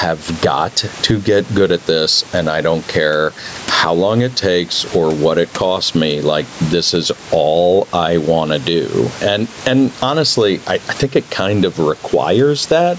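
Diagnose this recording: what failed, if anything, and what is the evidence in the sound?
What's gone wrong here is gain pumping, and it runs through the whole clip. The room noise sits about 29 dB below the speech, and the gain swings by around 10 dB, so everything sounds squashed. The likely cause is input gain set way too hot, with a fast limiter or compressor slamming it down on every peak. The call's band tops out at 8 kHz.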